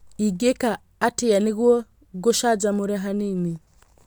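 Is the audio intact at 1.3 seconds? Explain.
Yes, at 1.3 seconds the speech plays through cleanly, with no dropout, click, distortion or other fault at that moment.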